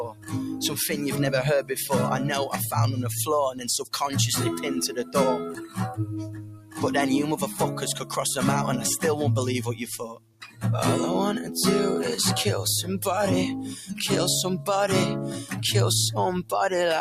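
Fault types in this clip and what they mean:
noise suppressor applied to music or sounds: A speech-tuned noise suppressor was left running on this audio, and it keeps mistaking sustained tones, room ambience and reverb for noise. Attacks punch through, but anything held or decaying gets pulled down, so the level keeps pumping and thinning, with the gain swinging by roughly 10 dB as it changes its mind about what counts as noise.
sound cut by the noise suppressor: These are the spots where the suppressor clamped down hardest, treating a sustained or fading sound as noise and ducking it well below everything around it. You hear it right at the start (0.0 to 0.7 s, about 13 dB down), then at 3.52 to 3.93 s (about 15 dB), 4.89 to 5.15 s (about 10 dB), 5.52 to 5.78 s (about 12 dB), 6.24 to 6.83 s and 10.1 to 10.63 s (both about 16 dB), where tails just sink away.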